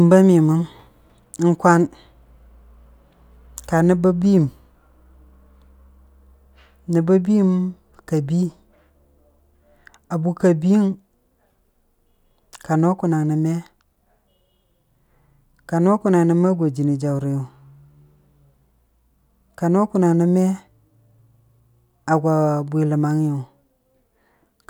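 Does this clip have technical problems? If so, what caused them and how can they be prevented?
No, nothing in this speech clip points to a technical problem, so there's nothing here that needs preventing.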